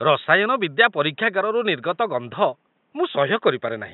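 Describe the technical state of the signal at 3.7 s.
At 3.7 s the signal is intact, with only the room's own background noise sitting about 45 dB below the speech.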